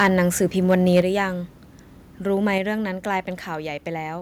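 From the very start to 0.19 s, and again from 0.7 to 1.01 s, the loudest speech peaks sound flattened and crackly. They push about 3 dB and then about 4 dB past the ceiling, with a small fraction of samples squared off. That is likely microphone overload from an input level set too hot.

At 1.02 s, voice and background drop together by about 6 dB, and at 2.58 s they drop by about another 4 dB. Each is a clean, sudden step. That points to microphone volume stepped down, likely the call software cutting the input gain, the first time right after those clipped peaks.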